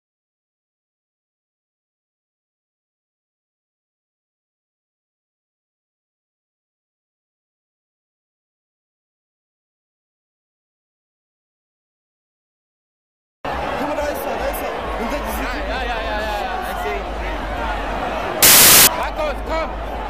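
From 18.43 to 18.87 s, samples built from the wrong bytes turn the audio into loud, harsh broadband noise: the spectrogram shows broadband energy.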